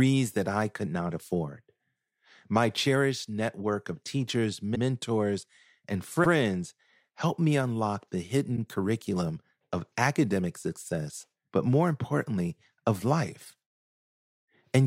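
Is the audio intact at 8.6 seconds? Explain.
No. Between 8.56 and 8.59 s, after "helped me unlock the", repeated frames replay one compressed block of about 26 ms, causing a brief stutter. Unlike a dropout, nothing is lost; the audio simply runs 26 ms longer.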